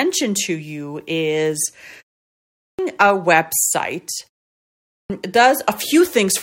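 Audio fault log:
2.42–2.79 s and 4.70–5.10 s, clipped start after a pause: after pauses of about 0.48 s and 0.49 s, sound bursts in abruptly with its opening missing, roughly 0.37 s and 0.40 s lost, the first just before "a website", the second just after it. The output device sleeps during silence and takes that long to wake again.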